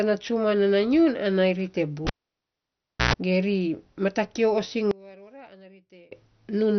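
Across the whole speech clip the sound is dull and granular, with a gurgling texture and nothing above 6.1 kHz. This is the signature of heavy MP2 compression, likely at a rate around 48 kbps. MPEG Layer II divides the signal into 32 sub-bands and shares out bits among them. At this rate the upper bands are switched off entirely, and the remaining bands flicker and are quantised coarsely, which produces the granular grit.

From 2.07 s to 3.13 s the cable is pulled and plugged in. A pop marks the disconnection. The audio then drops to near silence for about 1.0 s. As the plug goes back in, a 60 Hz mains buzz lasting roughly 112 ms appears while only the tip makes contact. A second pop follows as the full connection restores the signal.

Between 4.91 s and 6.12 s the speech falls by about 26 dB. The sound, background included, almost disappears, leaving only a faint residue. This points to one channel inverted, likely a polarity reversal on one side of the stereo pair. 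When the two channels are summed to mono, the material common to both cancels, and only their small difference survives.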